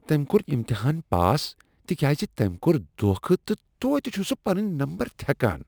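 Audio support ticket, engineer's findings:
Gritty, inharmonic fizz riding on the speech, throughout. Tracks loud and bright syllables. Crude rate conversion, probable upstream resampler. Nearest-sample method, repeating samples with no filter. Pattern points to 32 kHz converted to 44.1 kHz. Repeat cycle creates shifted, inharmonic copies of the voice. Error roughly 25 dB below signal.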